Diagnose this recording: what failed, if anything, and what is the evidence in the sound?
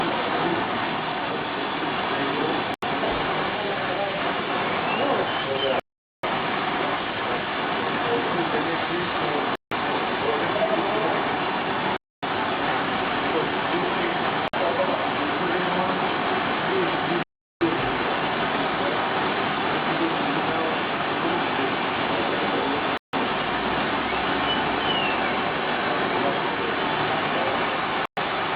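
Bluetooth stalls at 2.74, 5.80, 9.55, 11.97, 14.48, 17.23, 22.97 and 28.06 s point to a failure in the wireless playback link. At each point the sound drops to silence for 82, 437, 160, 260, 55, 382, 158 and 116 ms respectively, then resumes. The likely cause is interference delaying packets until the headphones' buffer emptied, so playback halted until retransmitted data arrived and refilled it.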